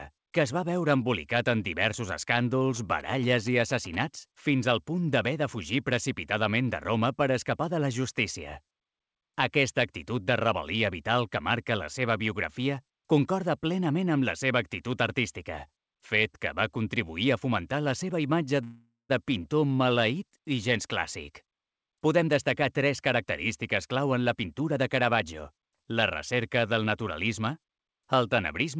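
From 2.76 to 3.96 s, GSM signalling bursts break in: a nearby 2G phone exchanging signalling with its network transmits short groups of radio bursts, and the audio circuitry rectifies them into an audible signal. The result is a galloping dit-dit-dit of short buzzes, pitched at the 217 Hz burst rate and sitting roughly 20 dB below the wanted sound.

At 18.64 s comes a call audio freeze, most likely because packets stalled in transit and the jitter buffer drained. The receiver stretches the last sound into a fading buzz or hiss that drops to silence for about 170 ms. When the audio resumes at 19.11 s it picks up exactly where it stopped, so a 454 ms gap has been inserted and nothing is lost.

Two bursts of jitter buffer speed-up follow. The buffer had accumulated more delay than its target, so the receiver trimmed out pitch-period-sized slices again and again to catch up. From 21.29 to 23.26 s the audio runs at 114% speed, shedding around 300 ms. 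From 23.87 to 25.60 s it runs at 109%, shedding around 150 ms. Pitch holds steady throughout while the pace sounds hurried. This all passes through a wideband call codec with no content above 8 kHz, which fits G.722 at 64 kbps.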